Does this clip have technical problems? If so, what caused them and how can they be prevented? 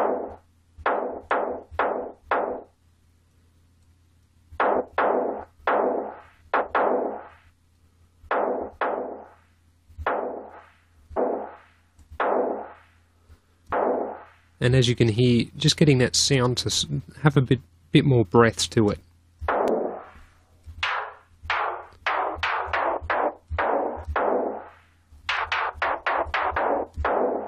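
Yes. Five very brief chirps or blips cut into the sound at 11.16, 13.71, 19.68, 25.37 and 26.55 s. They come from damaged data in a compressed stream: corrupted bytes make the decoder misread those frames and lose sync until it locates the next valid frame header. Prevent this by verifying files with checksums after transfer and storage, and by streaming over connections that detect and resend lost or corrupted data.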